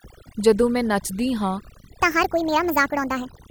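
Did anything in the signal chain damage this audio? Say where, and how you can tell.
Yes, two stages left marks. The first is overdone noise removal in the call processing, present for the whole clip. The suppressor is cutting individual frequency bands whenever they sit near its noise estimate, so the pauses drop and break up into twinkling, warbling specks. Quiet parts of the speech are removed along with the noise. On a spectrogram the background looks blotchy and punched out, with isolated bright dots and ragged gaps eating into the weaker harmonics.

The second is a section at the wrong speed, from 2.02 s to the end of the clip. At that point the speech suddenly runs 1.57 times faster, and its pitch rises by about seven semitones. The speech turns high and hurried from that instant. This likely happened at the editing or playback stage, where the audio was read against the wrong clock. 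On a spectrogram the harmonics and formants jump upward and spread apart at 2.02 s, and the waveform's cycles and syllables compress in time.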